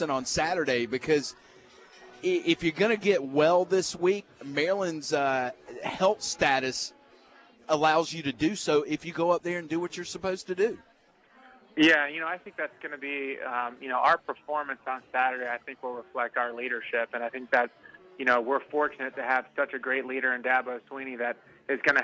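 No dropouts, clicks, distortion, level jumps or other technical faults can be heard anywhere in the signal.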